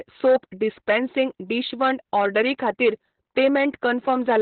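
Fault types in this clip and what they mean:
Opus voice compression: the speech runs through a linear-prediction voice coder throughout, with nothing above about 4.2 kHz, which fits narrowband SILK at roughly 8 kbps. Heavy coarse coding of the excitation leaves the voice muffled, hoarse and faintly robotic.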